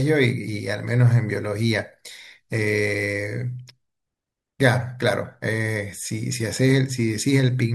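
Listening to the speech, nothing stood out as a technical problem.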